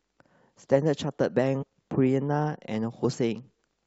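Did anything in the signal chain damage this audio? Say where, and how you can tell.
Yes. At the codec stage, compressed frames were skipped: around five 23.2 ms frames went undecoded, so the speech jumps ahead by roughly a tenth of a second. The join is at 1.61 to 1.64 s.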